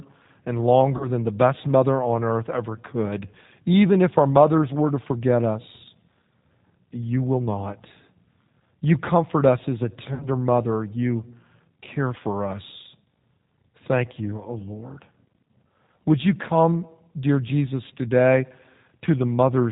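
Throughout, the speech carries plainly audible G.729 codec damage. The voice is rebuilt from a vocal tract filter and sparse pulses, giving a slightly rough, synthetic quality consistent with an 8 kbit/s G.729A stream. On a spectrogram, energy stops sharply at 4 kHz and the harmonics look smeared.

From 0.97 to 1.09 s, just before "than the best mother", VoIP packet loss concealed by the speech codec stretches the last sound into a fading buzzy tone or coloured noise. About 30 ms went missing, which fits a single lost packet. From 10.14 to 10.28 s, after "comfort us as a", a longer gap of about 60 ms, likely two packets, gets the same treatment. In both places the waveform shows a repeating, decaying pitch cycle, and the spectrogram shows flat, frozen harmonics with weak onsets as the decoder recovers.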